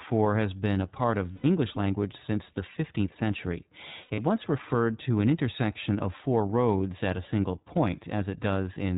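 Across the whole recording the speech sounds boxed-in and slightly rough and synthetic, with nothing above 4 kHz. That is the iLBC codec, and the damage is plainly audible. The narrowband coding discards all upper frequencies, and each frame's excitation is coded on its own. The texture fits a rate near 15.2 kbps with 20 ms frames.

From 1.32 to 1.45 s, between "been a part of" and "language since the", the speech turns into a held, faintly buzzy vowel for about 120 ms. These are lost iLBC frames, about six of them at 20 ms each. The decoder filled the gap by repeating the last pitch cycle mixed with noise. Clean speech resumes at once. From 4.02 to 4.20 s, just before "once referred to an", the same buzzy smearing returns. This time it is broken up across about 160 ms, with the longest stretch about 70 ms. The concealment covers several short runs of missing frames rather than one gap.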